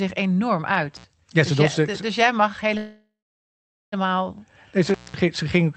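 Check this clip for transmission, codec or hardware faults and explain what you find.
Yes, there are faults: two connection glitches and one stall in the call stream, all heard through the Opus coding, which tops out around 8 kHz.

Intermittent contact, 0.96 to 1.04 s and again 4.88 to 5.17 s: a loose plug or cable opening briefly, for about 72 ms and then about 199 ms. The audio drops out or breaks up, with crackle at each edge and hiss sitting in the gap.

Call audio freeze, 2.77 to 3.94 s: the last sound is stretched out and fades, leaving about 800 ms of silence before things pick up again where they stopped, about 1.15 s late with nothing lost. That's likely the jitter buffer running dry while packets were held up.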